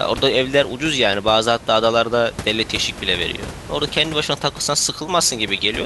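No technical faults are audible in this speech.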